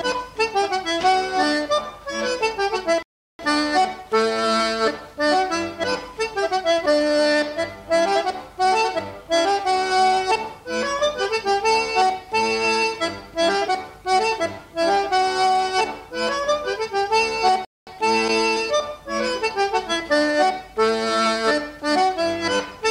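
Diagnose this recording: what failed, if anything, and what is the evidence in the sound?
A playback stall, twice, at the playback stage. The sound drops to silence mid-flow at 3.03 s for 0.37 s, and again at 17.65 s for 0.22 s. Then it returns. The likely cause is the player running out of data or its thread being blocked.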